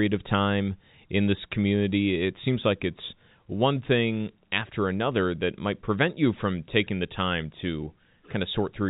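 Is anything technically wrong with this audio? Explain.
No, nothing technically wrong can be heard here.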